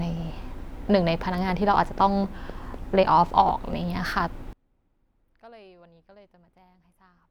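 From 1.50 to 3.74 s there's a train of clicks: around ten sharp ticks at a steady 4 per second, all much the same shape, poking up roughly 10 dB above the speech and audible in the gaps too. That kind of regular pulse is likely interference from nearby gear or a faulty connection or power supply. It sounds like a little metronome tapping over the talker.

Then from 4.53 s to the end, one channel is inverted, likely a polarity flip somewhere in one leg of the stereo path. Summed to mono, the two sides cancel: the level falls by about 32 dB, the centred voice and low end all but disappear, and you're left with a faint ghost of whatever differed between the channels.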